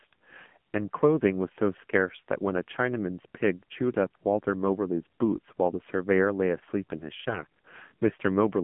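Throughout, the speech passes through the AMR narrowband mobile codec at a low rate, likely around 7.4 kbps. Only about 150 Hz to 3.4 kHz survives, and the voice sounds plainly buzzy and synthetic. From 7.28 to 7.45 s, AMR bit errors corrupt the weakly protected codec bits in three frames. The voice keeps its pitch but turns hoarse and gargly.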